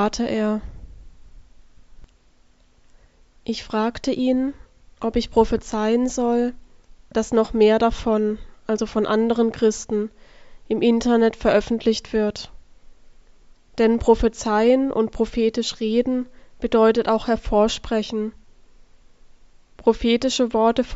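No technical faults can be heard anywhere in the audio.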